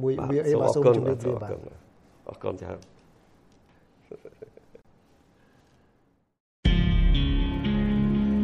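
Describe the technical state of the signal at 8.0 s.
At 8.0 s the signal is intact, with no dropout, distortion or other fault audible at that moment.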